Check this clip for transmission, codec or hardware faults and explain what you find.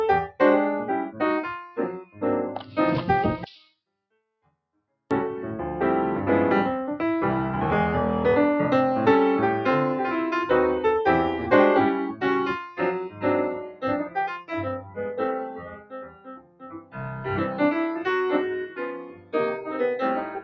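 The main fault is a speech noise suppressor applied to non-speech sound. It treats steady tones and tails as noise, so levels pump by about 10 dB throughout.

There is also sound cut by the noise suppressor at 1.63–2.22 s, 2.59–2.77 s, 12.63–17.6 s, 18.66–19.8 s and 20.21 s to the end. Held sound sinks by about 9 to 20 dB. The longest and deepest drop is at 12.63–17.6 s.

The call microphone path works normally, with nothing above 8 kHz.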